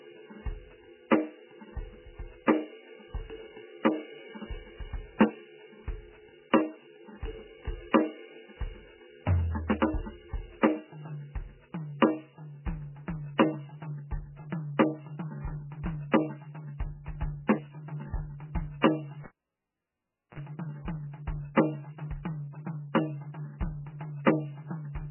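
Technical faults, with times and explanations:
Throughout, MP3 compression: the music sounds watery and swirly, with nothing above 3 kHz, likely from a very low-bitrate MP3 encode around 9 kbps. Short of bits, the encoder drops weak frequency lines frame by frame and cuts the treble, so attacks smear.
16.11 s, 18.81 s and 21.55 s, pre-echo: a short hiss of 19 ms, 26 ms and 19 ms respectively runs ahead of sharp attacks. The transform codec spread each block's quantisation noise evenly, so noise sized for the loud attack also filled the quiet moment before it, softening the onset.
19.24 to 20.40 s, cable pulled and plugged in: a pop, then about 1.1 s of near silence as the live cable came out, a 50 ms burst of 60 Hz mains buzz while only the tip made contact, and a second pop as the music returned.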